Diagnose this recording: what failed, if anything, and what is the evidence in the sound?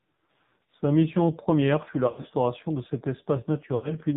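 The codec stage shows AMR narrowband mobile codec damage throughout. Nothing reaches above 4 kHz, and the speech has a heavy buzzy, synthetic quality that fits a rate near 5.9 kbps. A simple low-pass filter would only dull the sound without adding this vocoder buzz.

Lost AMR speech frames occur in the network stage. The first is at 2.08–2.27 s, after "mission première fut la" and before "de cet". It is scattered over 160 ms, with runs up to 60 ms, consistent with about five lost frames. The second is at 3.76–3.95 s. In each, the held pitch smears and fades rather than cutting to hard silence or clicking.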